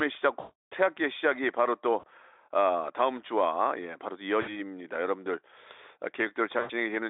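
Around 0.39 to 0.73 s there's a long stretch of VoIP packet loss concealed by the speech codec: about 320 ms of missing audio that the Speex decoder papers over by repeating its last pitch and filter at falling gain. It smears into a buzzy tone or coloured noise that fades, and stays weak a little past the gap. Shorter repeats land at 1.99 to 2.05 s, 4.41 to 4.55 s and 6.59 to 6.71 s, as brief fades.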